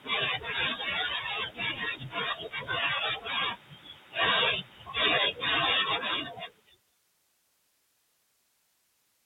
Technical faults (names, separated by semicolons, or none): speech cut by the noise suppressor